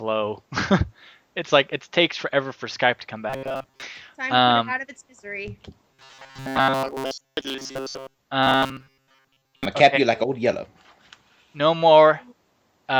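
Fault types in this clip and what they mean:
Robotic sound from repeated short buffers: at 3.30–3.83 s, 5.92–8.18 s and 8.43–9.65 s the sound stiffens into a rigid 134 Hz metallic buzz, likely because new audio arrived too seldom and a 7.5 ms chunk was looped over most of the real signal.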